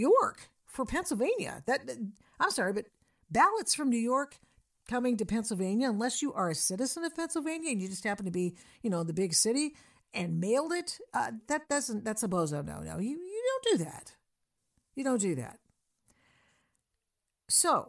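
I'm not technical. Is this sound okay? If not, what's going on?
Yes, this one's fine: the speech comes through steady and natural the whole way, with nothing odd to listen out for.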